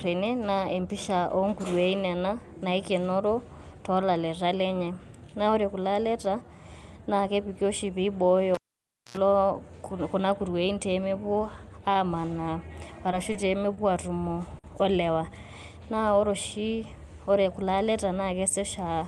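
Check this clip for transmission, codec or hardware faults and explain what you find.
Two faults are audible in the speech, carried over a call path whose top end stops near 12 kHz, which fits Opus at a modest bitrate.

From 8.55 to 9.17 s there is a pop and about 0.58 s of near silence, then roughly 86 ms of 60 Hz mains buzz and a second pop. This is a cable pulled and plugged in: the buzz comes as the tip alone touches and picks up hum.

There are three brief held sounds with a faint buzz or dip, at 13.32 to 13.36 s, 13.74 to 13.79 s, and 14.59 to 14.66 s just before "o lewaa". Each is a short stall from a late packet. The jitter buffer ran dry and stretched the last audio by 20, 30 and 50 ms, then resumed with nothing lost.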